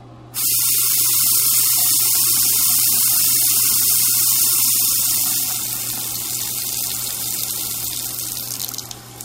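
From 4.38 s to 7.66 s a switching supply whistle sits under the sound: a faint, thin high tone wandering between about 3.1 and 3.4 kHz. A switching power supply running in an audible burst mode, or beating against another one, leaks its switching frequency into the audio, and load changes push that pitch around. On a spectrogram it is a narrow, slightly wavering horizontal line near 3 kHz. At roughly 45 dB below the signal it leaves no visible mark on the waveform.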